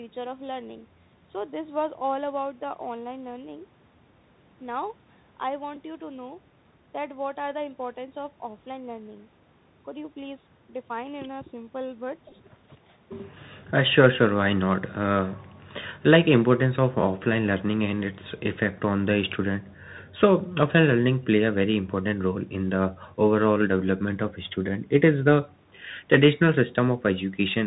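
The clip is speech carried over a Bluetooth CVSD headset codec for its whole length, and the codec damage is plainly audible. Every frequency above 4 kHz is missing, which fits the narrowband 64 kbps CVSD link. Sibilants come out scratchy, and loud bright passages distort where the one-bit up/down step cannot keep pace with the waveform. A grainy hiss sits beneath the speech throughout. On a spectrogram this shows as a hard ceiling at 4 kHz with a speckled noise floor filling the band below it. The second fault is a Bluetooth headset packet repeated, where lost packets were replaced by replaying the previous one. The first event, at 5.75 s, covers about 11.2 ms, which fits three lost packets. The second, at 12.29 to 12.33 s, is scattered over 30 ms and totals about 18.8 ms, which points to five lost packets, with the longest unbroken run around 10 ms. Within each run the repeat recurs every 3.75 ms and produces a brief buzz near 267 Hz. 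In the waveform this appears as identical 3.75 ms cells copied side by side. On a spectrogram it appears as a short comb of harmonics spaced 267 Hz apart.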